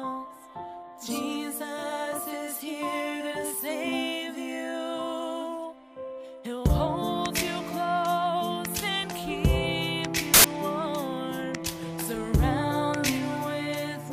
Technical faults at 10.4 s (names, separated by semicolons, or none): file tags played as audio